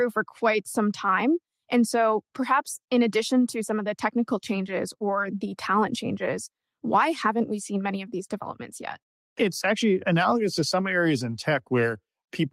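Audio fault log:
No faults found anywhere in this speech recording.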